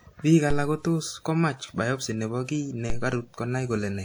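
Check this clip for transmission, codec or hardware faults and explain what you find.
Two DC steps are present in this speech clip. The first is at 0.51 s, just before "alak kotos komach biopsy". The second is at 2.9 s. At each one, the waveform's zero line jumps to a new offset, as when a converter recalibrates or an offset input is switched in. The offset then dies away, the way a 2 Hz high-pass would drain it. Each step is heard as a low thump or click, and the speech carries on unchanged.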